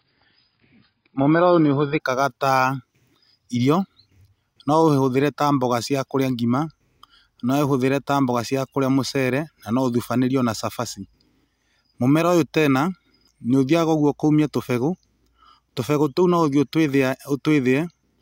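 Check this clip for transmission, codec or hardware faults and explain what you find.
One transmission fault is present, at the very start. From 0.0 to 2.0 s the clip shows an adaptive stream starting at a low bitrate. The player began on a cheap version of the stream so playback could start at once, then switched to a richer one after gauging the connection. For those first two seconds the speech has nothing above 5.1 kHz, sounding dull and smeared, consistent with AAC at around 16 kbit/s. At 2.0 s clarity jumps up abruptly without any gap, which suggests a step to roughly 96 kbit/s.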